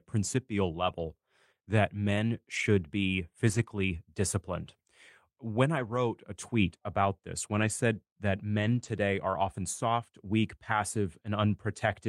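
Packets were lost, and the decoder rebuilt each lost packet from the low-bitrate copy carried in the next one. This is a lost packet rebuilt from error correction, so there is no gap. Instead, 40 ms at 0.83 s, 40 ms at 2.55 s after "that men", 60 ms at 3.47 s, 120 ms at 5.75 s before "a tweet about this", 80 ms at 7.53 s, and 140 ms at 8.59 s between "said that" and "are often soft weak" sound briefly rougher and noisier.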